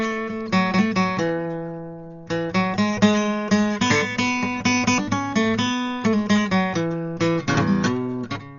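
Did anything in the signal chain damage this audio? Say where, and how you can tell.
Yes. The damage sits at the codec stage and runs through the whole music clip: the top end stops dead at 7 kHz, leaving everything dull, and sustained tones carry a rough, fluttering noise around them. That pattern is heavy Dolby Digital compression, likely from an encode at a very low rate, one that fits roughly 40 kbps. Starved of bits, the encoder narrowed the band and left many frequency lines without mantissa data, so the decoder filled those gaps with dither noise.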